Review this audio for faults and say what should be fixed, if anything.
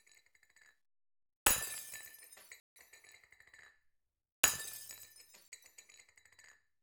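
Two blocks of digital silence appear, most likely where the output buffer was not filled in time and the missing samples went out as zeros. The sound drops straight to silence and returns with no fade: from 2.6 to 2.76 s a 160 ms hole is heard as a gap, and from 5.48 to 5.52 s a 40 ms dropout lands as a brief hole. Giving the audio thread enough buffer headroom and priority would prevent these likely underruns.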